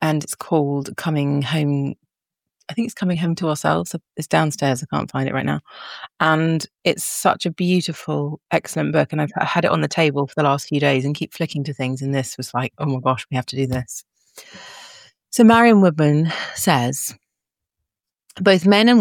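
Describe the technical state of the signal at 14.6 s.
At 14.6 s the signal is intact, with no audible dropout, distortion, clipping or other technical fault.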